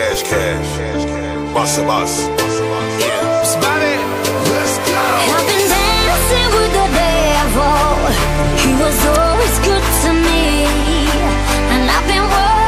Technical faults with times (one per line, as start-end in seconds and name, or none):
none